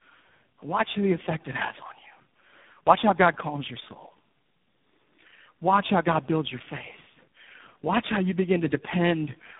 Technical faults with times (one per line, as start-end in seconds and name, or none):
0.00-9.59 tandem speech coding